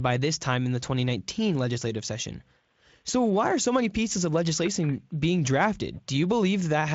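There are no technical faults in this speech clip to describe in time order.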